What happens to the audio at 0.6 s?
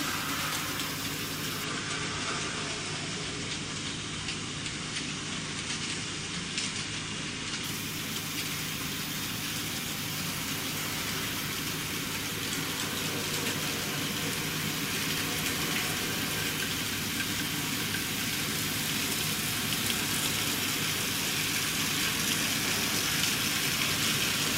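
Nothing goes wrong at 0.6 s; the audio plays through that moment intact, with no dropout, click, distortion or other fault.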